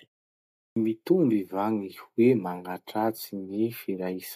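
Speech that opens with a clipped start after a pause: following roughly 0.36 s of silence at the top, the output path comes back late, so the audio from 0.36 to 0.76 s is swallowed and about 0.40 s of sound is lost. The first audible speech, "mitomby va", begins abruptly without its onset. The device appears to drop into a low-power state during the silence and needs that time to wake and relock before it passes sound through.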